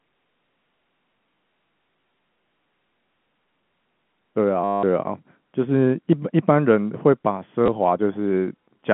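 Packets were lost from 4.64 to 4.83 s and from 7.66 to 7.68 s, and the receiver repeated the last packet to fill each gap. The 190 ms run buzzes at about 100 Hz, fitting 10 ms packets, a robotic stutter. The 20 ms gap is brief.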